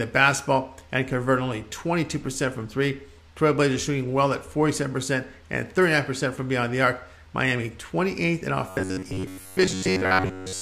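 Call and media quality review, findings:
Robotic sound from repeated short buffers, 8.69 s to end of clip (10.61 s). Rigid metallic buzz at 93.8 Hz, about 10.7 ms period. Likely audio buffer underrun: playback loops one short block while roughly 70% of real audio is skipped. Fixed pitch distinguishes it from concealment gaps or codec warble.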